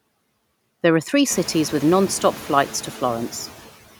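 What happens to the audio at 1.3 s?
Noise suppressor artifacts run through the whole clip, including 1.3 s: bands judged as steady noise are cut by about 16 dB frame by frame, so the background dips between words and returns beneath them.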